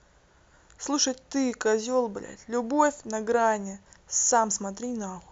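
Listening to the speech in this clip, nothing stood out as a technical problem at any point.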